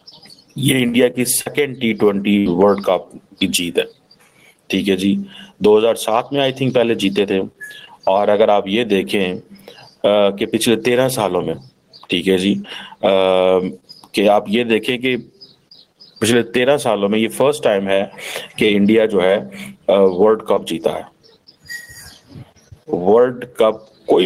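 Gain pumping runs through the whole clip, swinging around 20 dB, likely from gain set too high feeding a fast limiter. At 1.41 to 1.47 s there's a short concealed packet loss, where about 40 ms was filled in by extending the previous sound, leaving a brief smear. Then at 2.39 to 2.48 s a burst of packet loss gets concealed with a fading continuation of about 60 ms, and the audio picks up with roughly 60 ms skipped.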